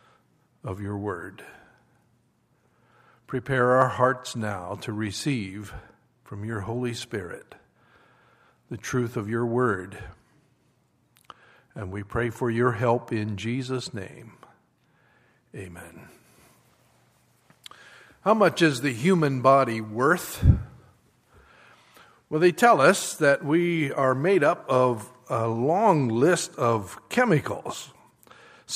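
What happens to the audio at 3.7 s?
Nothing goes wrong at 3.7 s; the audio plays through that moment intact.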